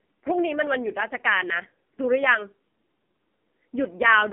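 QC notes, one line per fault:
Throughout: AMR narrowband mobile codec, with nothing above 3.4 kHz and a 200 Hz to 3.4 kHz telephone band. Heavy buzzy, synthetic speech fits the lowest 4.75 kbps mode.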